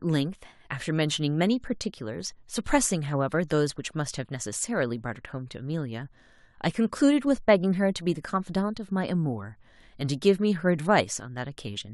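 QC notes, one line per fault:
Nothing to flag in this bit of speech; it all sounds fine to me.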